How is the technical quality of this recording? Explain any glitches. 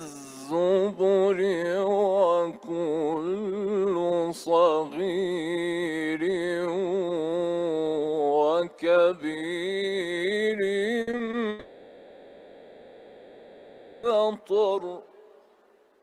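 The recording has two network glitches close together near the end.

From 11.01 to 11.35 s, repeated packet loss leaves five short holes, the longest 60 ms, each patched by repeating the previous sound. It comes out choppy, unlike a single long gap.

From 11.49 to 14.05 s the sound is replaced by a smeared, fading continuation with no true silence, most likely a long network dropout, before the audio resumes with that stretch missing.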